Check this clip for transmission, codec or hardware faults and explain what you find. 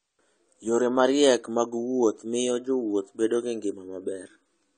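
One codec fault runs through the whole speech clip. AAC compression: nothing remains above 9 kHz, and the sound is plainly dull and smeared, likely from AAC-LC coding at a low bitrate around 32 kbps.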